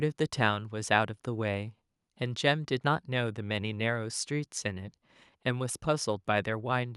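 A short stretch of speech, and nothing technically wrong turns up anywhere in it.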